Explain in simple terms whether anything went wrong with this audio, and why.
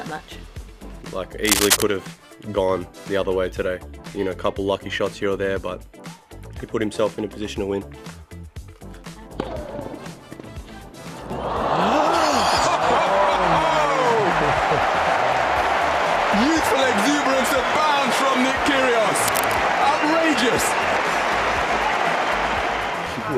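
Two short bursts of scratchy, rustling noise cut across the sound, first from 1.45 to 1.82 seconds and again from 19.27 to 19.58 seconds. The first is about as loud as the audio itself, and the second is a bit quieter. This is cable scratch noise. A worn cable, plug or knob was likely being moved, making its electrical contact flicker rapidly and spray crackly bursts into the signal.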